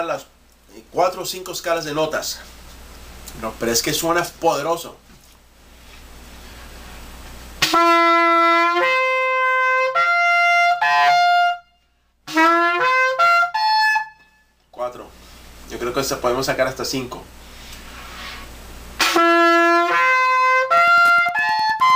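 The audio picks up Wi-Fi interference from 20.74 s to the end at 21.95 s: a steady tick every 102.4 ms, roughly 25 dB below the signal, from a nearby radio's beacons being rectified by the audio circuitry. These show as evenly spaced vertical spikes on the waveform and thin full-height stripes on a spectrogram.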